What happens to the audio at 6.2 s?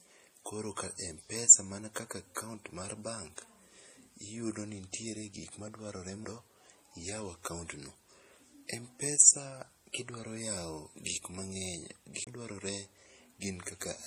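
A CD skip occurs at about 6.25 s. A knock or a disc flaw made the laser lose its track and land on a different turn of the spiral. The player mutes for a very short moment, roughly a couple of milliseconds, and then carries on from another point on the disc. The result is a small tick, and the speech continues from a different spot instead of flowing on.

Underneath that moment, as everywhere else in the clip, there are signs of transcoding between lossy codecs. The sound likely passed through MP3 at 40 kbit/s and then HE-AAC at 48 kbit/s. The second encoder spent part of its bits re-coding the first one's artefacts, then added its own. The two kinds of artefact are heard together, and nothing survives above 15.2 kHz.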